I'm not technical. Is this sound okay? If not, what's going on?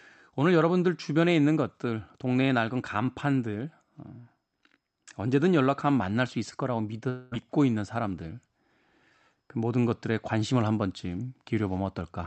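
No. From 7.09 to 7.33 s the speech breaks off into a brief fading buzz. This is a long network dropout: audio likely stopped arriving over the call connection, the receiver stretched the last sound to fill the gap, and about 0.22 s of speech was lost.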